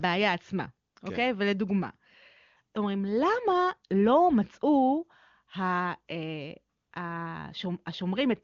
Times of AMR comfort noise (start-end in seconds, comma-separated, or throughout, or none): 0.89-0.95, 6.77-6.91